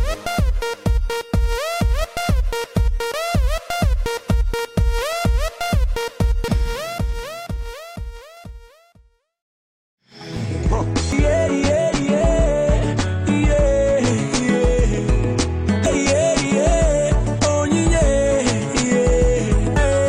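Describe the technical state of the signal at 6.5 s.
At 6.48 s the compressed stream carries damaged data: corrupted bytes make the decoder misread a frame, lose sync and hunt for the next valid frame header. The result is a single brief chirp or blip breaking the audio at that instant.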